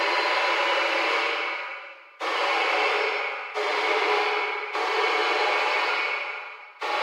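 Nothing in the audio stood out as a technical fault on listening.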